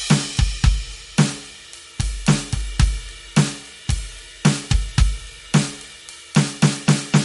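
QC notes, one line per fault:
throughout, MP3 compression: treble stops at 11.2 kHz and the music sounds watery, with smeared attacks, likely from a low-bitrate encode starving weak frequency lines.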